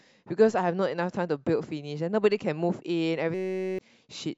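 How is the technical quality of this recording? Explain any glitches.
The speech has one clear glitch. From 3.34 to 3.79 s, a system hang loop takes over. Playback froze while the hardware kept replaying a single 5.33 ms slice, which fits a 256-sample buffer. The result is a steady 188 Hz buzz rather than a plain dropout's silence, and around 0.4 s of speech is lost.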